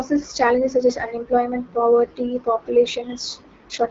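AMR wideband (HD Voice) codec damage runs from start to finish. The speech is modelled with a pulse-excited vocal tract filter and sounds plainly rough and raspy, which fits a low mode such as 8.85 kbit/s. Nothing sounds above 7.3 kHz.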